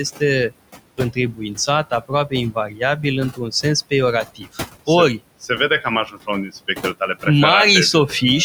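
From the start, noise suppressor artifacts run through the whole clip. The suppressor judges which frequency bands hold steady background and pulls them down frame by frame, here by about 20 dB. The room noise, which sits about 14 dB below the speech, drops away in the gaps and comes back up under the talking.

Between 0.97 and 7.26 s there is speech cut by the noise suppressor. Here the processing mistakes parts of the speech for background and turns them down too. The deepest drop reaches about 17 dB. The losses are scattered rather than continuous, adding up to around a second and a half. Soft consonants and the tails of words sound swallowed. Quieter stretches fade, as if the talker briefly moved away from the microphone.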